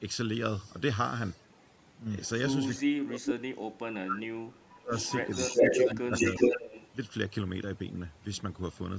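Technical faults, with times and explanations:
Throughout, overdone noise removal: the noise reducer is pushed too hard, so frequency bands near its noise estimate get knocked right down along with the softer parts of the speech. The background drops and breaks up into twinkly specks.
2.25–2.29 s, 2.69–2.82 s, 4.99–5.95 s and 6.15–6.89 s, echo leak: a delayed copy of the speech trails in roughly 370 to 390 ms late. It starts faint, around 30 dB and then 15 dB under the speech, and later rises to about 5 dB louder than the speech itself. This is likely a far-end loudspeaker echo the canceller didn't fully remove.
2.82–4.93 s and 5.95–6.11 s, speech suppressed in double talk: the speech dips, falling by as much as about 30 dB during the first stretch and about 10 dB briefly in the second. The likely cause is the echo canceller ducking everything while both sides talk at once.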